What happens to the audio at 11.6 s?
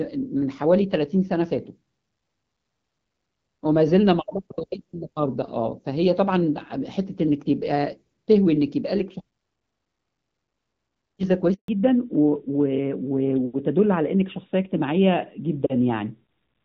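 A handover gap cuts the sound from 11.54 to 11.68 s. For about 140 ms no audio frames arrive while the call switches networks. The sound fades out within a few tens of milliseconds and stays silent until the new link carries audio again.

A fallback to narrowband follows at 11.68 s and lasts to the end. Before it, the wideband HD Voice codec sounds lightly coded and clear. After the switch, nothing above 4 kHz remains. The sound turns duller and rougher, which fits the older narrowband AMR codec at around 12.2 kbit/s.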